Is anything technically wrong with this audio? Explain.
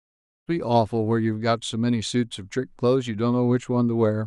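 No, nothing technically wrong can be heard here.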